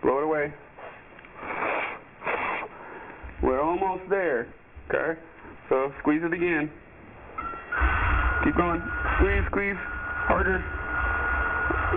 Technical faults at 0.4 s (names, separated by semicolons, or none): aliasing